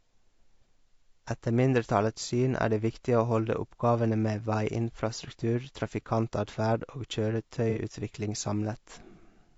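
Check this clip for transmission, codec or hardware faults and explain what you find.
Two faults are present: codec damage across the whole speech clip and one brief dropout with repair.

Throughout, the coding is likely low-delay AAC compression. Its short frames resolve pitch harmonics poorly, and at a rate that fits about 32 kbps the voice turns plainly rough and grainy, with noise between harmonics and a synthetic-sounding top band.

From 7.70 to 7.79 s there is AAC frame loss with concealment. Roughly 60 ms of coded audio, which fits two lost frames, never arrived, so the decoder rebuilt it from the last good spectrum. The result is a short, smeared, noisy patch in the speech.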